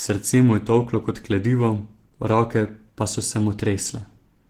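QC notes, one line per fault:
throughout: Opus compression. The speech sounds rough, hoarse and grainy, and the damage is plainly audible. Content still reaches about 20.2 kHz, so the band is not narrowed. This likely comes from Opus in its hybrid speech mode, at a rate around 16 kbps.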